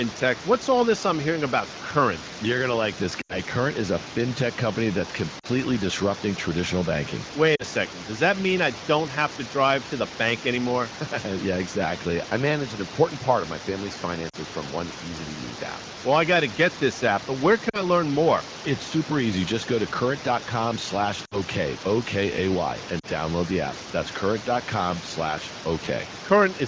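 Speech over a wideband (HD Voice) call, with seven spots of lost AMR speech frames. Right after "going to like this" at 3.21 to 3.37 s, the decoder covers the gap by reusing the last good pitch and vocal-tract settings while turning the gain down. The result is a fade to near silence, and its length fits about four missing frames. The shorter glitches at 5.39 to 5.46, 7.56 to 7.64 (after "disrupting traditional banking"), 14.29 to 14.36 (between "part of my family's" and "from one easy to"), 17.69 to 17.82, 21.25 to 21.36 and 22.99 to 23.06 s are quicker dips. Each covers about 40 to 60 ms of concealed audio. The voice comes back weak or rough for a moment, under a room-noise floor about 16 dB below the speech.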